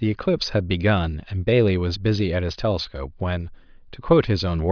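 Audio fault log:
No faults heard in this clip.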